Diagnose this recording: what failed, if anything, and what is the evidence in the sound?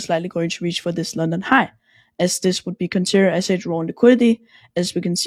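Nothing failed; no stage shows any audible fault.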